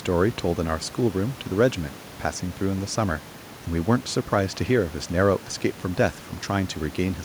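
A speech recording with no technical faults to report. Room noise from the microphone's surroundings sits about 21 dB below the speech, as part of the recording itself.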